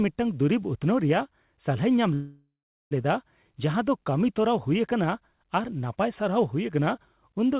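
At 2.14 s the speech stops and a call audio freeze begins, lasting until 2.93 s. The last sound carries on briefly as a fading buzz or hiss, then about 0.42 s of silence follows. The likely cause is packets held up in transit, so the jitter buffer ran dry. When the audio resumes it picks up exactly where it left off. Nothing is lost, but everything after runs about 0.77 s late. Throughout, the narrow call band ends at 4 kHz.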